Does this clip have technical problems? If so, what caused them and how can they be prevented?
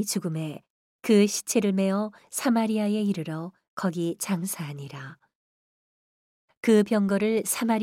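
No, this clip has no technical problems, so there is nothing to trace to a cause or to prevent.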